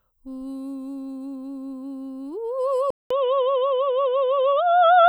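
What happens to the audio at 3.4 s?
At 3.4 s the music is inside an input switched to a poorer device, which runs from 2.90 s to the end of the clip. The recording likely moved mid-take to a lesser microphone or a headset's call profile. A 200 ms silence marks the switch. Afterwards nothing passes above 3.8 kHz, so the music sounds dull and boxy at much the same level, over a faint new background noise around 45 dB below it.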